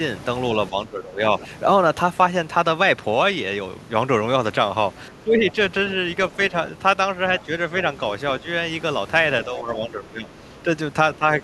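Between 0.7 and 1.21 s the speech dips by about 10 dB. That's speech suppressed in double talk: both ends were likely talking at once, and the echo canceller, unable to tell the local talker from loudspeaker echo, pulled everything down. It happens again at 5.11–5.56 s (about 15 dB), 9.46–10.67 s (about 10 dB) and 11.16–11.24 s (about 15 dB).

At 1.41–1.47 s and 7.39–7.45 s there are brief scraps of the other side's voice leaking through, around 25 dB below the talker. The echo canceller likely failed to scrub all of the loudspeaker sound from the microphone.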